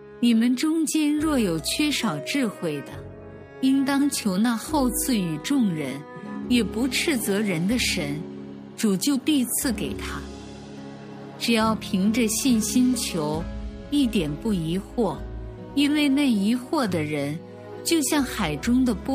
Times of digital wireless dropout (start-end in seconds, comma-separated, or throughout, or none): none